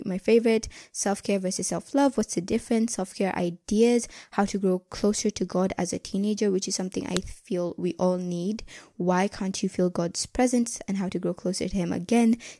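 At 7.17 s, a file header is played as audio: two pieces of this speech recording were joined, or streamed one after the other, without the second piece's WAV header being stripped out. Those few dozen bytes of file metadata were read as if they were sound samples, producing an abrupt burst of arbitrary values. The result is a single sharp, loud click or snap, lasting only an instant and unrelated to the speech around it.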